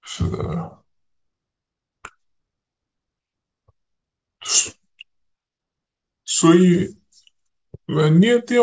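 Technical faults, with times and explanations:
Throughout: wrong sample rate. The speech runs at about 0.73 times normal speed and sits about 5.5 semitones low. This fits 22 kHz audio played at 16 kHz.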